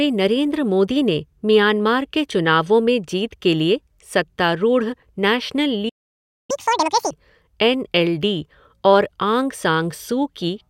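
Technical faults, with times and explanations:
5.89–6.51 s, playback stall: the speech halts mid-flow and the output goes completely silent for about 0.6 s, most likely because the player ran out of buffered data or its thread was blocked. The waveform shows a flat line, and the spectrogram a blank vertical gap.
6.51–7.11 s, catch-up at higher speed: the speech resumes with "एन एल" at double speed and about ten semitones higher as the player resamples its backlog. The waveform shows compressed syllables, and the spectrogram shows harmonics shifted upward.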